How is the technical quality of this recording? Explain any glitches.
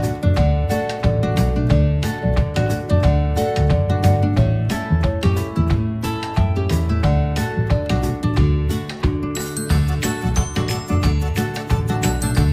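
Nothing in the recording stood out as a technical problem on listening.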